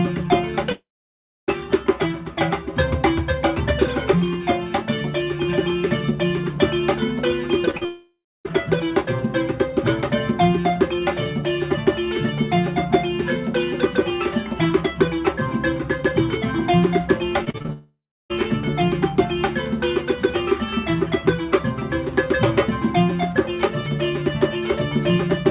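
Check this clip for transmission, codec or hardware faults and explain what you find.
Yes, there are transmission faults: three long network dropouts and two bursts of repeated packet loss. The audio stops above 4 kHz, which fits a G.711 mu-law call path.

Long network dropouts occur at 0.72 to 1.50 s, 7.85 to 8.47 s and 17.73 to 18.32 s. Each lasts about 0.6 to 0.76 s. The likely cause is incoming audio ceasing. The receiver stretches the last sound into a fading buzz, then falls silent. Sound resumes with that stretch lost.

Repeated packet loss (robotic sound) appears at 7.66 to 8.49 s and 17.45 to 17.71 s. Packets go missing again and again, in gaps of up to about 39 ms. Each gap is patched by repeating the last sound. The result is choppy. In the second burst, nearly half the span is patched. The first burst surrounds a dropout, and the second leads straight into one.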